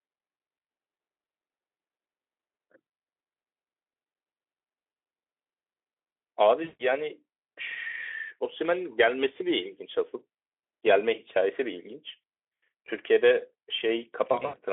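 VoIP packet loss concealed by the speech codec strikes at 6.63 s for 160 ms, briefly at 12.21 s, and scattered across 14.31 to 14.57 s. The decoder stretches lost sound into a fading buzz or coloured noise.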